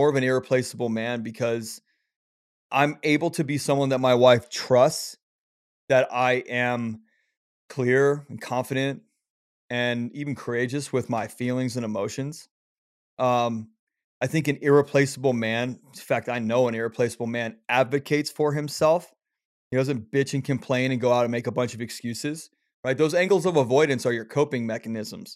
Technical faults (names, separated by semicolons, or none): none